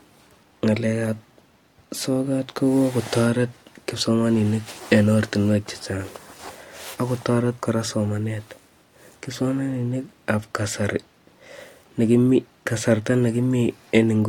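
Listening to this speech recording, nothing stood out as a technical problem at any point.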